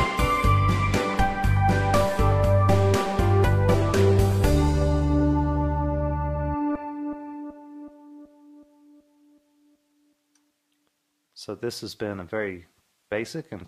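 Nothing in the audio stood out as a technical problem on listening.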